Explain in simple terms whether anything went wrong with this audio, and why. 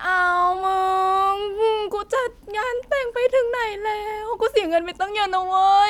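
Something did go wrong. From about 0.15 s right through to 5.89 s there's a fast, faint ticking under the speech, roughly every 70 milliseconds, so around a hundred tiny clicks that blur into a soft rattle. That's clock slip clicks, likely from two pieces of gear each keeping their own time without syncing up. Whenever the drift adds up to one whole sample, a sample gets dropped or doubled, and you hear a tick.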